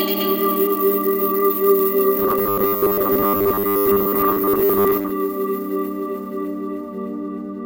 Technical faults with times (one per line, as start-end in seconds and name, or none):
2.20-5.14 robotic sound from repeated short buffers